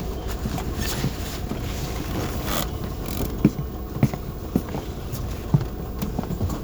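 No technical faults can be heard anywhere in the audio; the signal stays steady and intact throughout.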